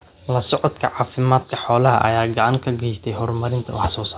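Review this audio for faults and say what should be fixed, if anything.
Nothing needs to be fixed, as the review found no faults in this audio.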